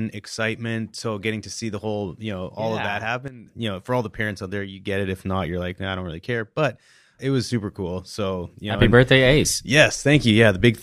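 At 3.28 s the speech and its background noise drop together by about 12 dB, then return at 3.47 s; from 8.82 s to the end both jump up by about 9 dB. Each sudden gain jump happens within a single sample with no ramp, likely from a digital gain setting applied instantly. Unlike a compressor or fade, nothing eases in, and unlike a dropout the noise floor moves with the signal, so the sound never disappears.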